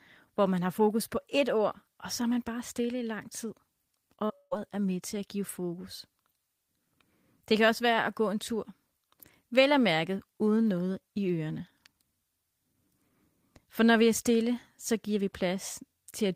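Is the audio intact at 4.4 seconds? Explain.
No. Just before, from 4.25 to 4.31 s, there is short concealed packet loss. About 40 ms of audio arrived too late to play. The decoder patched the gap by extending the preceding sound, so it comes across as a brief smear before normal audio returns.

At 4.4 s itself, a long network dropout runs from 4.35 to 4.53 s. It is likely caused by packets failing to arrive over the network. For about 150 ms the receiver stretches the last sound into a fading buzz or hiss. That leaves roughly 30 ms of silence. The audio resumes at "er med til at", with the missing part gone.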